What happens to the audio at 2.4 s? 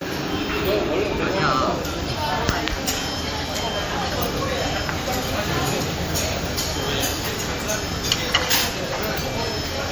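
At 2.4 s the audio carries MP3 compression artefacts that run through the whole clip, likely from low-bitrate encoding around 64 kbps. Starved of bits, the encoder zeroes weak frequency lines that flicker between frames, giving a plainly audible watery, swirling texture and smeared attacks.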